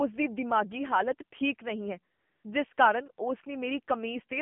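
The whole clip passes through the AMR narrowband mobile codec. Only about 200 Hz to 3.4 kHz survives. The speech sounds buzzy and synthetic, which fits a low AMR-NB rate near 7.4 kbps. The coarse pulse model is plainly audible.

AMR comfort noise appears twice. After "ਹਾਲਤ ਠੀਕ ਨਹੀਂ ਹੈ", from 2.14 to 2.44 s, the phone judged the talker silent. Real sound gives way to smooth synthetic noise. After "ਠੀਕ ਨਹੀਂ ਹੈ ਜਿਸ", a brief 40 ms patch switches in from 2.74 to 2.78 s.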